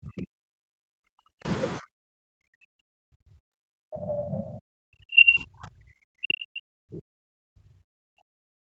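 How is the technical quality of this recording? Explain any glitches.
The recording is heavily compromised by echo-control problems across almost its whole length. Its content stops at about 8 kHz, which fits a wideband call codec such as Opus at around 40 kbps.

Speech suppressed in double talk runs from 0.0 to 1.46 s and again from 1.79 s to the end. The speech is repeatedly pushed down, by as much as 40 dB, and sounds gated, dull and broken into pieces. The likely cause is that both sides talked at once, so the echo canceller could not tell the local talker from loudspeaker echo and attenuated everything. On a waveform the envelope collapses in ragged steps. A spectrogram shows energy vanishing, especially in the upper bands.

The other side's voice leaking through appears from 4.1 to 4.23 s as a brief second voice. It is only a few dB below the main speech. The likely cause is loudspeaker playback reaching the microphone and surviving the echo canceller. 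On a spectrogram this shows as a short patch of overlapping harmonic stripes that doesn't line up with the main talker's pitch. In the waveform it is an irregular burst within the suppressed region.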